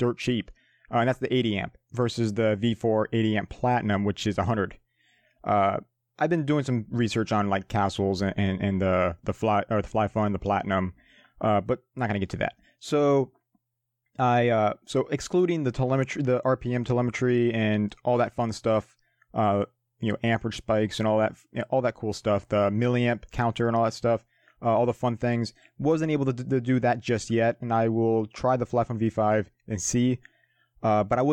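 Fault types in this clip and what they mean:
Nothing here needs flagging, since there's no audible fault of any kind in this speech recording.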